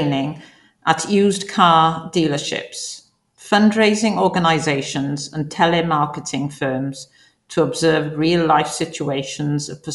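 Throughout the speech, the coder has likely run Dolby Digital compression at too low a rate, consistent with something like 64 kbps. Starved of bits, it cuts the band off so nothing remains above 11.4 kHz, and leaves many frequency lines without mantissa detail, filling them with dither noise on playback. The damage is plainly audible: the voice sounds dull and muffled, with a rough, fluttering grain clinging around its tonal parts.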